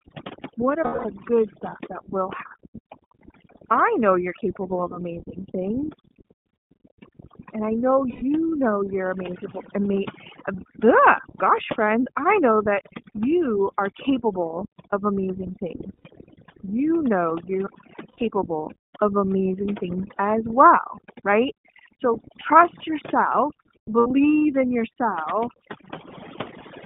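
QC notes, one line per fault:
Throughout, overdone noise removal: the suppressor is set too hard, so bands near its noise estimate are pushed down or cut. The background drops and breaks up into twinkling specks, and the quieter parts of the speech are stripped away.
Throughout, iLBC codec: the line passes only about 150 Hz to 3.6 kHz, so everything above is gone. Each 30 ms frame is coded on its own, which fits the 13.33 kbps mode. The speech stays clear but plainly rough and synthetic-sounding.
0.84–1.06 s, 8.10–8.23 s, 15.97–16.06 s, 18.09–18.19 s, 23.99–24.07 s, lost iLBC frames: gaps of 210, 120, 90, 90 and 60 ms. In each, the decoder repeats the last pitch cycle with added noise, heard as a held, buzzy or breathy vowel. Since iLBC frames stand alone, the speech returns cleanly almost at once.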